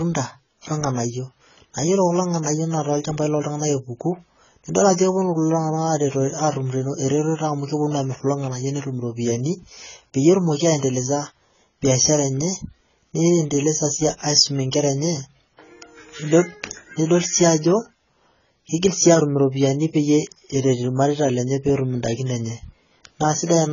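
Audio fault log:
throughout: AAC compression. The speech has likely passed through an AAC-LC encoder at a low bitrate, and the damage is heavy, which fits a rate of around 16 kbps. With so few bits, the encoder quantised its frequency lines coarsely and cut everything above 7 kHz. The speech therefore sounds dull and smeared, with a warbling, fizzy texture on sustained sounds and sibilants where the coder left gaps in the spectrum or filled bands with substitute noise.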